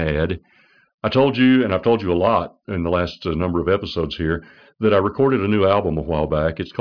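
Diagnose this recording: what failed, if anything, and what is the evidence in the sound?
Nothing failed; no fault is audible anywhere in the recording.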